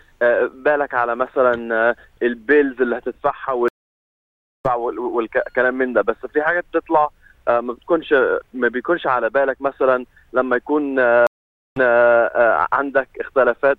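At 3.68 s and again at 11.27 s, a stream reconnect: the connection dropped, leaving about 0.96 s, then 0.49 s, of silence before a fresh decoder resumed mid-stream, first skipping roughly 0.7 s ahead, then repeating 0.33 s. Unlike a plain dropout, the sound doesn't continue where it stopped.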